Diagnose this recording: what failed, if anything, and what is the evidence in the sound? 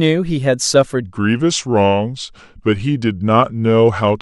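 Section at the wrong speed, likely from a playback clock mismatch. From 1.03 s onward, speech plays at 0.827x and about three semitones low. The spectrogram's harmonics step down and stretch.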